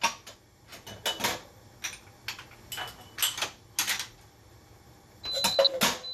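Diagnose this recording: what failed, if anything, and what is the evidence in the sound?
Codec stage: likely MP2 compression at a low rate, consistent with about 80 kbps, switching off upper sub-bands. Throughout, the audio sounds dull, with gurgling, granular distortion.

Reception stage: DAB burbling. Uncorrected bit errors corrupt the MP2 data from 5.52 to 5.67 s, putting short blips of noise into single sub-bands.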